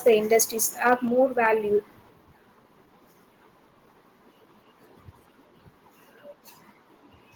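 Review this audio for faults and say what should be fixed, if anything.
The speech has microphone overload twice, from 0.07 to 0.42 s and again from 0.86 to 0.94 s. The loudest moments push roughly 3 dB past full scale, so the converter flattens their tops and a small fraction of samples end up clipped. You hear that as a gritty, crackly edge on the peaks. It's most likely just the mic input gain set too hot for how loud the talker gets. To prevent it, pull the input gain down until the loudest bursts peak a few dB below full scale.

There's also a microphone volume stepped down pattern. The level drops abruptly by about 2 dB at 0.08 s, then by about 4 dB at 1.08 s and by about 4 dB again at 2.1 s. Voice and background fall together each time, so it sounds like a sudden step in the recording level rather than a change in how the speaker is talking. The likely cause is the call software's automatic gain control reacting to those clipped peaks and turning the device input down in chunks. 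To prevent it, set a sensible input level up front and turn off automatic mic adjustment so nothing rides the gain mid-call.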